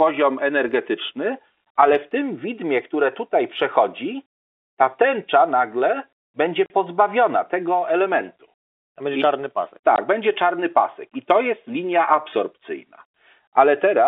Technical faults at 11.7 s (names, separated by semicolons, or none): none